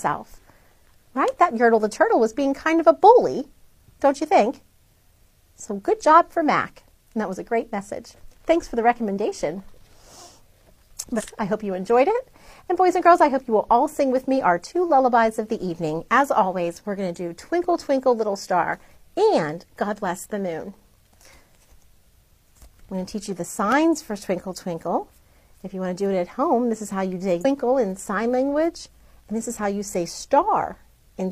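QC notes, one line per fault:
11.15–11.22 s and 27.40–27.45 s: damaged data in a compressed stream. Each is a short glitch, about 70 ms and 50 ms long. Corrupted bytes there make the decoder misread frames, lose sync and hunt for the next valid frame header.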